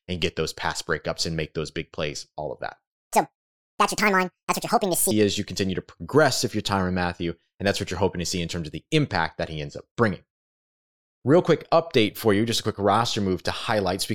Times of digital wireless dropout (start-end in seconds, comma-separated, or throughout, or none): none